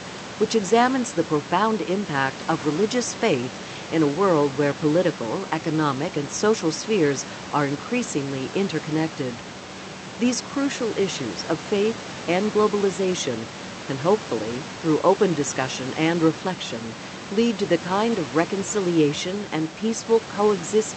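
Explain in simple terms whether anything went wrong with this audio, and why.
Nothing went wrong with the recording: the background sound is just the room the microphone was in, and the speech came through the call connection the way such calls normally sound, including the loss of the very highest tones.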